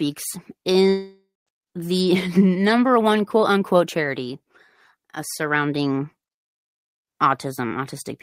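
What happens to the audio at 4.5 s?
Nothing goes wrong at 4.5 s; the audio is intact at that moment.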